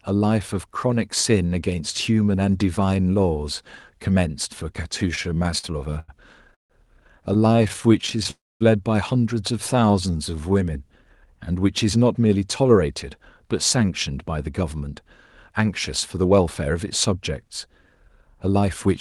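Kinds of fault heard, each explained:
Repeated stalls (stutter): The speech catches and drags in two stretches. From 5.15 to 6.72 s it halts 13 times, the longest hold lasting 152 ms, so about a quarter of that span is filled-in sound. From 7.34 to 8.27 s another 13 briefer catches of at most 17 ms add up to 134 ms. Packets kept arriving late, the jitter buffer kept running dry, and the receiver stretched the last sound each time, so nothing is lost.
Call audio freeze: At 8.31 s the speech stops dead for about 0.3 s, with a brief held continuation of the last sound and then 230 ms of silence before it resumes at 8.63 s right where it left off. The likely cause is packets held up in transit long enough to empty the jitter buffer completely. The receiver bridged the wait, and the playout delay grew by 298 ms as a result. Nothing was dropped; a gap was inserted.
Jitter buffer slow-down: From 9.75 to 10.54 s the speech turns sluggish and drawn out at 85% speed while its pitch stays unchanged. 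The buffer was low, so the receiver rebuilt its reserve by repeating single pitch periods and fragments of pauses over and over. This added 130 ms of audio. The stretched sounds can carry a faint warble from the repeated cycles, with Opus coding underneath limiting the top end to about 12 kHz.
Jitter buffer speed-up: From 12.05 s nearly to the end, at 18.87 s, the speech sounds hurried, running at 106% of normal pace with the pitch unchanged. The buffer was holding more audio than its target delay. To work that excess off, the receiver repeatedly cut out short pieces one or a few pitch periods long. Over the stretch this trimmed around 0.4 s in total.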